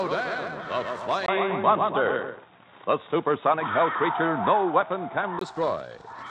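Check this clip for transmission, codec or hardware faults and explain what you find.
One fault stands out: from 1.26 to 5.41 s, the input likely switched to a poorer device. Nothing above 3.8 kHz comes through, so the sound turns dull and boxy. A brief 20 ms silence marks the changeover, with a level shift of about 5 dB and a faint new noise floor. That shift in level and background sets it apart from a simple bandwidth drop.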